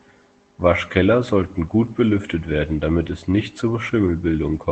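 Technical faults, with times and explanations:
1.85 s and 3.31–3.41 s, lost packet rebuilt from error correction: short rough, noisier patches with no gap, as the decoder played low-bitrate copies carried by the following packets.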